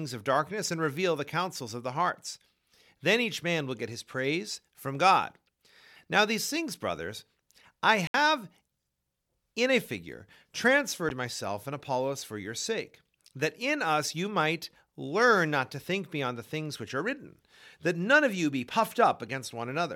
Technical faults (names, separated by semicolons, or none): Bluetooth stall